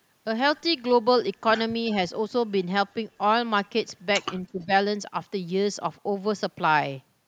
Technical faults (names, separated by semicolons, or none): speech suppressed in double talk; echo leak